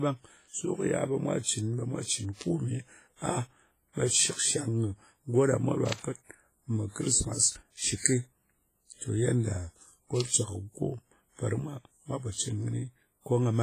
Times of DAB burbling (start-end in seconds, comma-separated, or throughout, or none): none